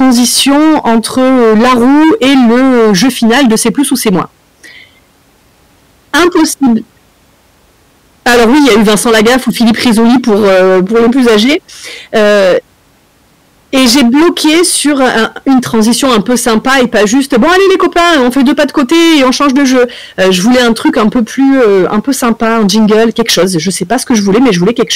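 Hard clipping runs through the whole speech clip, from start to finish. The signal reaches the limiting stage about 20 dB hotter than it can pass, so the peaks are sliced flat, and close to a third of the samples sit pinned at the ceiling. Those squared-off tops generate harmonics reaching high into the spectrum. Because the overload is so heavy, the result is a harsh, constant fuzz on every loud syllable rather than occasional crackle.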